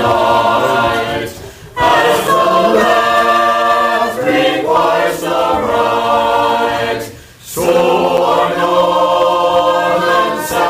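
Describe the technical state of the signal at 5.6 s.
At 5.6 s the signal is intact, with no dropout, distortion, click or other technical fault to be heard.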